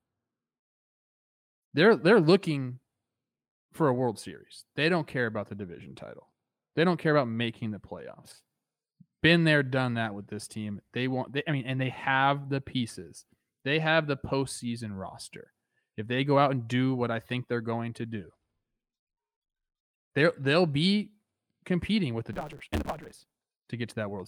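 From 22.33 to 23.47 s, just after "be competing with the", the speech suddenly hurries along about 1.6 times too fast at roughly normal pitch, under a 138 Hz buzz. This is a block size mismatch (truncated): each block, which fits 512 samples written, loses its tail because the next stage reads less.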